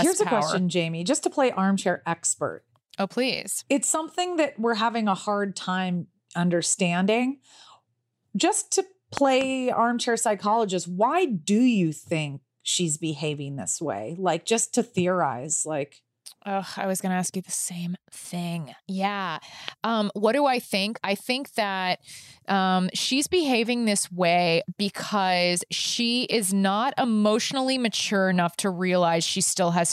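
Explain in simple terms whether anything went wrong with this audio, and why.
Loud pops at 9.17 to 9.43 s and at 19.68 s. The first is a quick pair of sharp pops, right before "armchair psychologist why do", and the second is a single pop. Each stands out well above the speech, which carries on underneath without a break. A pop like this is most likely a sudden jolt of electricity, from a plug, a switch, static or a glitch in the equipment, that gets added to the recording as a brief thump.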